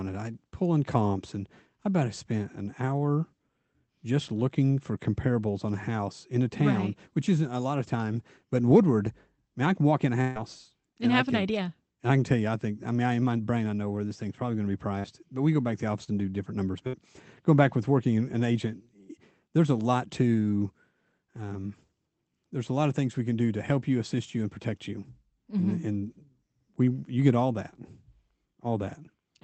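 At 10.21 s the sound freezes into a held, fading sound for about 140 ms, then jumps ahead, with roughly 140 ms of the original missing. This is a burst of packet loss. A run of packets failed to arrive in time, so the receiver stretched the last audio it had, lowering its level as the gap went on, and resumed playback later in the stream.

At 14.99 s, right after "probably going to be", the same thing happens more briefly. About 45 ms of stretched sound covers a 40 ms gap.

At 16.04 s, between "go back to the" and "and do different numbers", a quick smear of about 35 ms replaces 40 ms of audio. This is short concealed packet loss. A few packets never reached the decoder, and it extrapolated from the preceding sound before blending back into the real signal.

At 16.87 s, after "and do different numbers" and before "going back with working", another burst of packet loss holds and fades the sound for about 60 ms over a 60 ms hole. 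The Opus call path keeps the audio band to about 8 kHz, which fits a rate of about 20 kbps.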